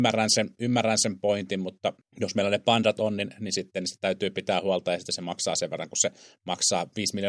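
No technical faults can be heard anywhere in the speech recording.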